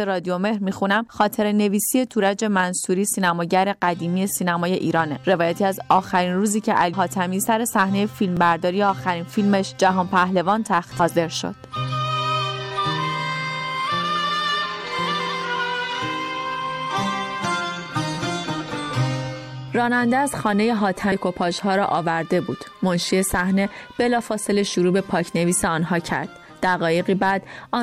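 At 6.92 s the sound jumps ahead. That's compressed frames skipped: a run of encoded frames never made it to playback, either missing from the stream or thrown out by the decoder as damaged, so roughly a fifth of a second simply vanishes. The step sizes fit a frame length of about 23.2 ms. Because neighbouring frames overlap, the join comes out as a short smeared blip, not a sharp click.

At 8.37 s there's a tiny stutter from overlapping chunks. The audio was handled in 10-second blocks, and each new block started a little before the previous one finished, so about 13 ms gets played twice right at the seam. It's a quick catch or tick, and it lands on the same regular spacing each time.

The same frame skip returns at 10.99 s, again losing around a fifth of a second behind a soft blip. The chunk-overlap stutter recurs at 18.15 s, one block interval after the first. A final frame skip comes at 21.11 s.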